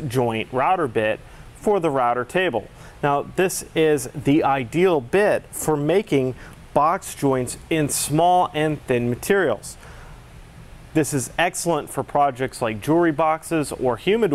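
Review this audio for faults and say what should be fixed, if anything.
No technical faults can be heard in this audio, so nothing needs fixing. No dropouts, clicks, distortion or other playback problems show up anywhere in it.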